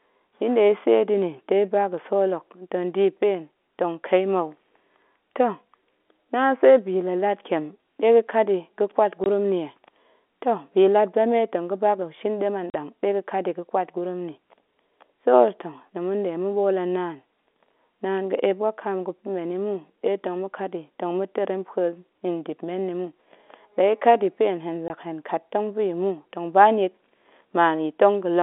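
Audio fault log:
9.24–9.26 s, 12.70–12.74 s and 24.88–24.90 s: packet loss filled with silence. Gaps of 20, 40 and 20 ms follow "ɗe ga̱kat yi ga̱ƙwat" (before "nni ye"), "tong ga̱ba ga̱shin ɗem" and "ya̱ pa̱ hen hen". The lengths fit lost 20 ms packets replaced by silence. The abrupt cuts show as flat-line waveform gaps and blank vertical strips across the narrow telephone band.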